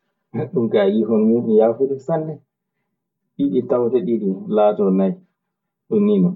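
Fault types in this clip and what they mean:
Channel delay (comb filtering): one side of this speech lags the other by around 5 ms, so the mono sum cancels in evenly spaced notches from roughly 100 Hz up, leaving it hollow.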